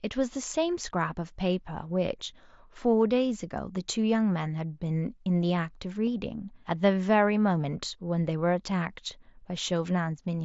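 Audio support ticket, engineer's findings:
Single loss at 6.07 s, nearly hidden in the speech, no buzzy hold or warble after. Probable component: Bluetooth headset link, concealed Bluetooth headset packet loss. Single gap of about 7.5 ms, consistent with one dropped mSBC frame, filled by receiver repeating best-matching recent waveform. Band limit at 8 kHz and light graininess on loud syllables match normal mSBC codec behaviour.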